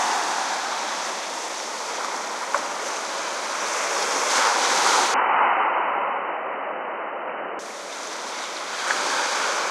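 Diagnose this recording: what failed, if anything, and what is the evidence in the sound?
The fault sits at the capture stage, in the input device itself. From 5.14 s to 7.59 s the everyday sounds turn dull and boxy. Nothing above about 3 kHz survives in that span. The level shifts a little, and a faint new noise floor appears well beneath the signal. There is no gap at either switch point. The cause is likely an input switched to a poorer device, a narrower-band microphone with its own tone, level and hiss, before returning to the original.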